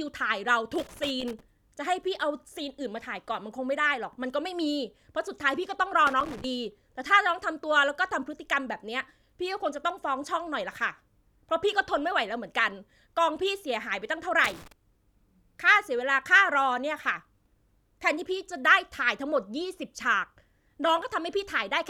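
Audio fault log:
0.75 to 1.40 s, 6.07 to 6.44 s and 14.44 to 14.72 s, loose connector crackle: three irregular bursts of scratchy crackle cut into the speech, the first about two thirds of a second long and the later two shorter. It sounds like a worn or dirty contact somewhere in the cable run shifting and losing touch, so the signal keeps getting chopped on and off, and any DC on the line turns each break into a little pop.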